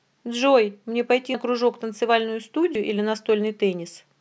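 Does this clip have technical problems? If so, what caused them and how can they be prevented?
Yes. At 1.34 s and 2.75 s the speech jumps ahead, skipping about 100 ms and 70 ms, likely dropped buffers (overruns) where unread samples were overwritten. Prevent with larger buffers and higher-priority audio capture threads.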